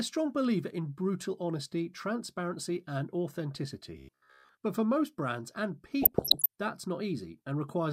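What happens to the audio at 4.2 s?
New audio likely arrived too seldom between 3.98 and 4.55 s, so playback looped a short buffer of about 15 ms through most of that span and dropped the real audio. This robotic sound from repeated short buffers turns the speech into a rigid, metallic buzz at 66.8 Hz.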